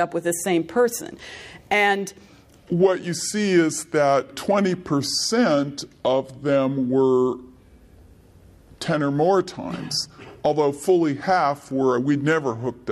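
From 2.58 s to the end at 12.91 s, a section at the wrong speed: the audio runs at 0.769 times its recorded rate, so everything slows and drops about five semitones together, likely from playback against a mismatched clock.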